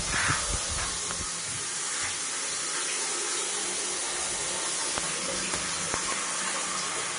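Throughout, the audio sounds hissy and grainy, with roughened tones, smeared attacks and nothing above 10.6 kHz. This is likely Vorbis compression at a low bitrate, around 34 kbps. The treble is quantised so coarsely that its fine detail turns into noise.

A sharp, loud pop cuts in from 1.11 to 1.13 s and another from 4.98 to 5.00 s, each roughly 20 dB above the surrounding sound, which carries on beneath. Between 5.94 and 6.14 s, two pops arrive in quick succession at a similar level. These are likely voltage steps or pulses from a plug, switch, static discharge or driver glitch, added to the signal.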